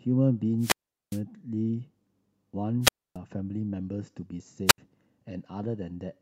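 Wireless microphone squelch dropouts hit at 0.58–1.22 s, 2.81–3.17 s and 4.66–4.78 s. The RF fades, hiss swells, and the receiver mutes the speech for about 400, 280 and 73 ms.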